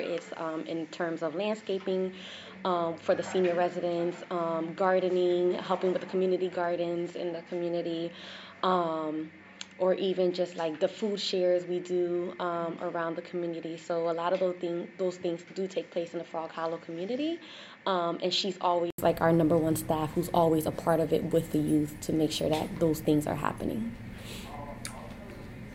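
From the start until about 18.98 s the sound is band-limited, with nothing above 7.6 kHz, and it sits a few decibels quieter over a faint noise floor of its own, well below the signal. At 18.98 s a gap of 80 ms leads into fuller, brighter audio. The likely cause is an input switched to a poorer device. Unlike a plain low-pass filter, the noise floor, level and tone all change together at a single break.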